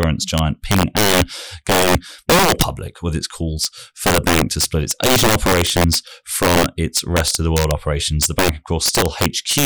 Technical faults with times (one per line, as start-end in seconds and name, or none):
0.00-9.65 integer overflow